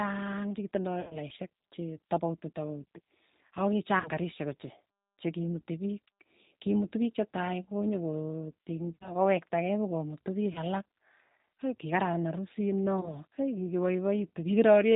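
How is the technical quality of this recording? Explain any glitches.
Quality is limited by low-bitrate telephone coding, with five short dropouts.

The whole clip passes through the G.729 codec at 8 kbit/s. It rebuilds speech from a vocal tract model and a few pulses per frame. Nothing above 4 kHz survives. The voice sounds rough, narrow and slightly synthetic.

VoIP packet loss concealed by the speech codec occurs at 1.01–1.17 s before "che tapauiti tapauti", 4.00–4.09 s, 8.95–9.14 s, 10.53–10.60 s after "pokomutu piik", and 13.01–13.15 s after "hei kikararan arusit no". The decoder stretches the last sound into a fading buzzy tone or coloured noise, and the voice stays weak briefly afterward.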